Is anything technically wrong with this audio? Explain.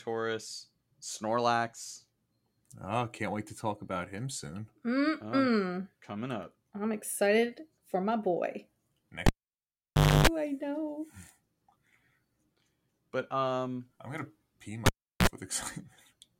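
Yes, a cable pulled and plugged in, twice. At 9.26 to 10.27 s, just before "I know", the speech pops and drops out for about 0.96 s, then a short 50 Hz buzz comes in while only the plug tip touches, and it pops back. Right after "um I'm gonna pee", at 14.86 to 15.27 s, there's a shorter 0.36 s dropout with a brief 60 Hz buzz.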